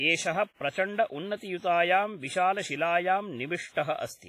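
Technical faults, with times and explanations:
Throughout, WMA compression: the speech sounds washy and ringing, with a hiss that swells and fades along with the voice, and the top end stops dead at 15.5 kHz. This is likely heavy WMA coding at a low bitrate, consistent with roughly 24 kbps. The transform codec uses long blocks, so quantisation noise smears over tens of milliseconds around each sound, and weak spectral lines get zeroed, leaving that hollow, watery texture.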